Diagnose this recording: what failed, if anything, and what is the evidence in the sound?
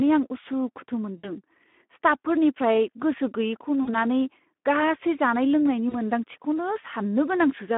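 Codec stage: the whole recording carries Speex codec damage. The speech is band-limited to roughly 200 Hz to 3.5 kHz and sounds plainly hoarse and noisy, which fits a low Speex setting near 11 kbps. Too few excitation bits leave a coarse, buzzy texture.

Network stage: there are three gaps of VoIP packet loss concealed by the speech codec, at 1.17–1.27 s, 3.83–3.95 s and 5.89–5.96 s. In each gap the speech smears into a fading buzzy tone or coloured noise as the decoder extrapolates its last pitch and filter, and it stays weak briefly afterward.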